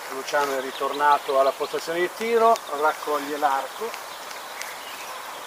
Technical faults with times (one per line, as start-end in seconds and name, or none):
none